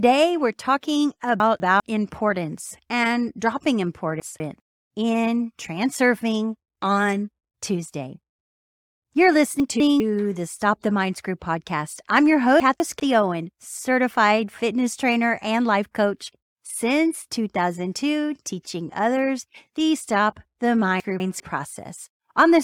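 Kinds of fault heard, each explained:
Chunks out of order: a 200 ms chunk plays one chunk late at 1.4, 4.2, 9.6, 12.6 and 21.0 s, jumbling speech at hard joins.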